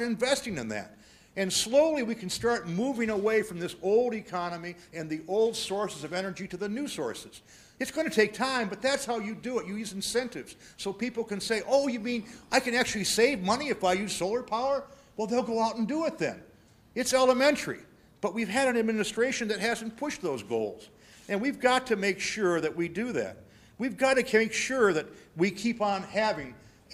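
Nothing in the audio jumps out as a fault, with no glitches, dropouts or odd artefacts turning up anywhere along the way.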